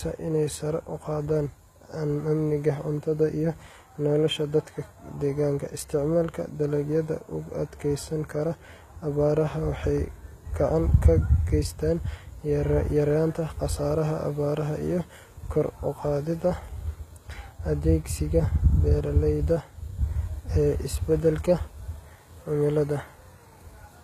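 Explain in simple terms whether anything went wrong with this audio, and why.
The s sounds and the crisp top of the speech come across gritty, metallic and lispy from start to finish, and nothing at all is heard above 14.9 kHz. The likely cause is HE-AAC compression. To save space, this format stores only the lower part of the sound properly and fakes the treble by copying lower frequencies upward. That fake treble stays bright but doesn't match the real one, which is why the hiss sounds artificial.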